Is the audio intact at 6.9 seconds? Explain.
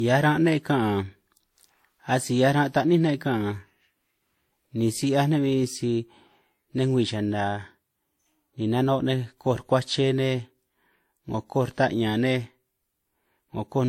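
No. At 6.9 s the speech likely went through transcoding between lossy codecs, with WMA then Vorbis stacking their artefacts, so their different artefacts are heard together over a band that stops near 16.6 kHz.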